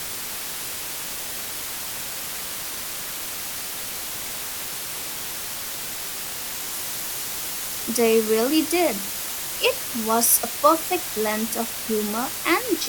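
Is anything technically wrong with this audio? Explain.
Yes, there's one problem. Throughout, the speech has been cut to about 5 bits with dither, so the rounding error turns into a steady, even hiss sitting nearly as loud as the voice, with no distortion.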